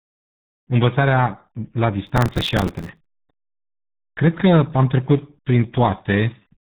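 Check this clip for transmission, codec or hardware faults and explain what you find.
Two faults: a low-bitrate codec over the whole clip, and a burst of crackle in the middle.

The RealAudio 14.4 codec damage runs from start to finish. This is the old dial-up speech codec working at 8 kbit/s, and it keeps nothing above 3.8 kHz. It squeezes the speech into a very coarse model of itself, so the damage here is heavy. The top end is gone, the voice sounds muffled, and there's a gargly, watery texture over every syllable.

Then, right after "învățarea la", there's processor overload crackle from 2.07 to 3.22 s. The machine couldn't finish its tiny audio buffers on time, so each late one got filled with a repeat of old audio with hard edges. Those repeats come in a fast run, which points to buffers of around 3 ms with something like seventy deadlines missed. You hear it as a gritty, tearing crackle sitting on top of the speech, and it stops once the load clears.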